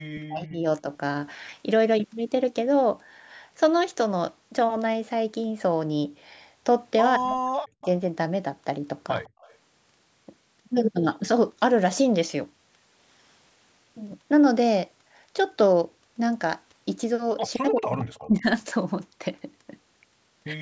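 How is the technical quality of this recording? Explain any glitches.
The recording has audible call-path faults: the talker is repeatedly ducked, and faint delayed copies of the voice leak back in.

Speech suppressed in double talk occurs at 0.13–0.66 s, 0.82–0.88 s, 7.17–7.88 s and 17.58–18.46 s. The voice dips by about 40 dB, and by only about 5 dB in the brief 0.82 s event. The likely cause is an echo canceller that, with both sides talking, couldn't tell its own talker from loudspeaker echo and attenuated everything. On a waveform the envelope collapses to near-flat; a spectrogram shows the speech harmonics blanking out across the band.

Echo leak appears at 7.82–7.86 s, 9.25–9.55 s and 17.99–18.05 s. A copy of the voice trails the original by 168 ms, at about 20, 30 and 15 dB below the speech respectively. This is likely residual loudspeaker sound that the far end's echo canceller failed to remove and sent back. 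It sounds like a faint ghost. A spectrogram shows a weaker duplicate of the harmonic pattern shifted 168 ms later, within a band that ends at 8 kHz from the normal call microphone processing.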